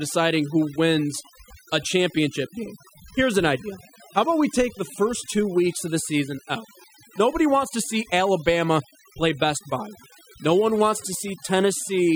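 From start to finish the speech carries overdone noise removal: a noise reducer set far too aggressively has pulled individual frequency bands down or off whenever their level sat close to its noise estimate, taking quiet parts of the voice along. The gaps fall to near silence scattered with twinkling specks. Unlike a noise gate, which mutes everything at once, the damage here is patchy across frequency, band by band.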